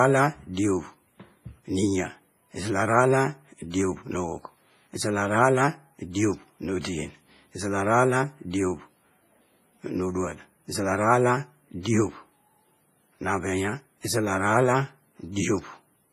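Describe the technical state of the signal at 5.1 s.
At 5.1 s, as throughout, the speech carries heavy WMA compression. Quantisation noise smeared across long transform blocks sounds washy and ringing, likely from a low-bitrate encode. The spectrogram is blank above 15.5 kHz.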